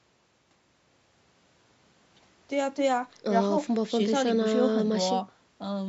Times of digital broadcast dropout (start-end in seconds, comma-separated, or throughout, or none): none